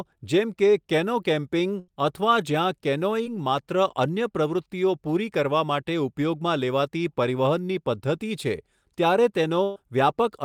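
At 1.79 to 1.90 s and again at 9.63 to 9.78 s, a burst of packet loss leaves roughly 80 and 120 ms missing. The receiver stretches the last sound and fades it down, then jumps ahead. At 3.24 to 3.27 s, short concealed packet loss fills about 17 ms. It leaves only a quick smear.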